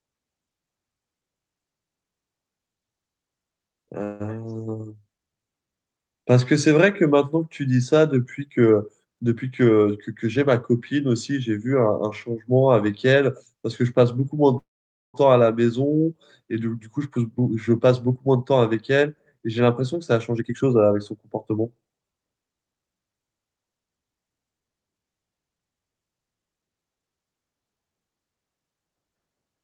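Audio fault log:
4.03 to 4.35 s and 14.58 to 15.16 s, call audio freeze: the speech stalls and the last sound carries on as a fading buzz, briefly at 4.03 s (about 165 ms filled) and longer at 14.58 s, where the fill dies to near silence for about 490 ms of its 558 ms. The speech then resumes where it stopped, with nothing lost. The likely cause is delayed packets draining the jitter buffer, adding 165 ms and then 558 ms of delay.
9.04 to 10.47 s and 16.86 to 22.19 s, jitter buffer speed-up: the speech sounds hurried, running at 111% speed while its pitch stays the same. The receiver was holding more audio than it aimed for, so it cut out many short pitch-period-length pieces in quick succession, trimming roughly 150 ms in the first stretch and roughly half a second in the longer second one.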